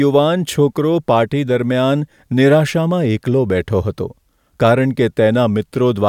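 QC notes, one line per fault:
No faults heard in this speech.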